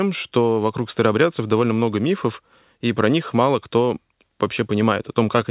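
No technical faults are audible.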